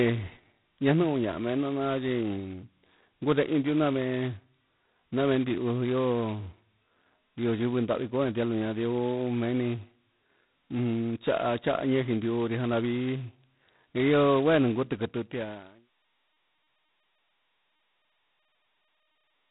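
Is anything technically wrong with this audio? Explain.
Yes, the whole clip has been through G.726 ADPCM at a low rate, which fits 16 kbit/s. That's only two bits per sample of prediction error, so a rough, rasping hiss rides on the speech, rising and falling with its level, and nothing gets through above about 3.9 kHz. The fade-out starting around 15 s and finishing by 15.9 s is a clean editorial fade.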